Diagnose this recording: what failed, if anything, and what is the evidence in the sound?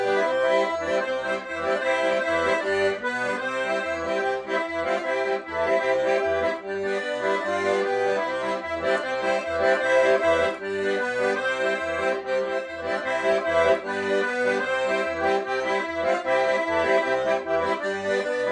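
Nothing stood out on listening that would point to a failure at any stage of the recording or playback chain.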